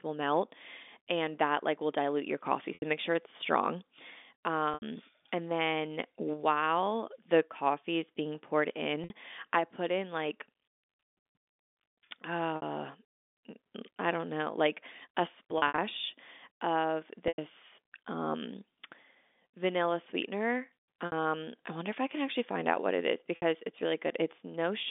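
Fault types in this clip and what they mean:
Packet loss with pitch repetition: chunks of the stream dropped out, and the receiver papered over each gap by looping the last pitch cycle and fading it, giving seven brief buzzy holds or dropouts of 60 to 100 ms, plus a scattered burst after "don't know like a".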